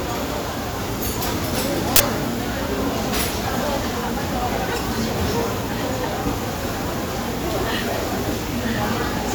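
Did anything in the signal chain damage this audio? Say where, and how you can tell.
Yes, an uninitialised buffer at the driver or buffer stage: a loud 40 ms burst of digital noise from 1.96 to 2.0 s, leftover memory played as samples.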